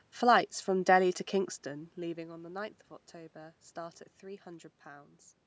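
No technical faults are audible.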